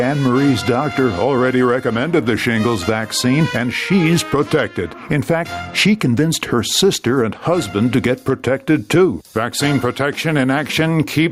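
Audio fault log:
Throughout: gain pumping. The gain ducks sharply under each loud sound, a level swing of around 15 dB, leaving loud and soft parts squashed together. The likely cause is input gain set far too high, with a fast limiter clamping down.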